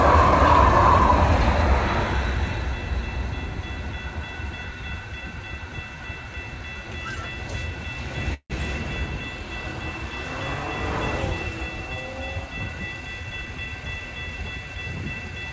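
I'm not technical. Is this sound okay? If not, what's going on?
No. At 8.34 to 8.52 s there is a call audio freeze: the sound stalls, the last bit is stretched into a fading buzz or hiss, then about 70 ms of silence. This was likely from delayed network data. Unlike a dropout, nothing is lost; the audio resumes exactly where it stopped.

From 12.66 to 13.68 s there is a jitter buffer speed-up: the sound plays about 15% faster to catch up, losing roughly 0.15 seconds. The pitch stays the same, unlike a sped-up recording, so it just sounds briefly hurried.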